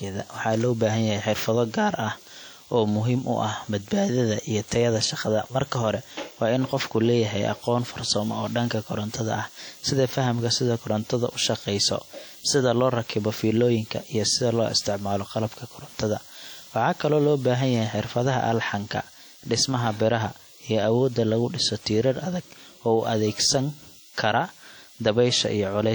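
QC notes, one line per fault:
Throughout, likely WMA compression. The speech rings and sounds washy, with hiss swelling and fading with the signal. Long transform blocks spread quantisation noise over tens of milliseconds and drop weak components, which fits a bitrate near 48 kbps.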